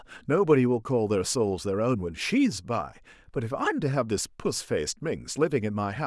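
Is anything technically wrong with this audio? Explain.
No, nothing technically wrong turns up in this speech recording.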